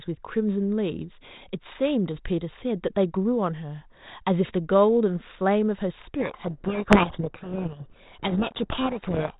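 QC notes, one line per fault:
6.20–9.39 s, codec payload misread: the decoder takes each G.726 code word's bits in the wrong order, so the speech is buried in harsh distortion until the clip ends.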